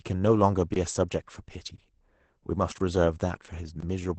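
Throughout, the speech has been through Opus voice compression running its SILK linear-prediction coder in wideband mode, which points to a low bitrate of about 12 kbps. At that rate the coder describes the vocal tract with a compact predictive model and codes the excitation driving it only coarsely, and it discards the top of the spectrum. Nothing is present above 8.7 kHz, so sibilants and breathy detail lose their air. The codec damage is plainly audible: the speech sounds muffled and hoarse, with a slightly robotic edge.

At 2.78 to 2.80 s and again at 3.80 to 3.83 s there is a gap between chunks. The audio was handled in blocks of 1.0 s, and about 21 ms of silence was inserted at each join, likely from codec padding or a player starting each block late. No sound is missing, but the flow breaks at these points. Each break is heard as a brief hole, and the two holes fall about one second apart.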